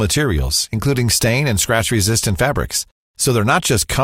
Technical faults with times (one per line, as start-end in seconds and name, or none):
2.81 overlap between stream segments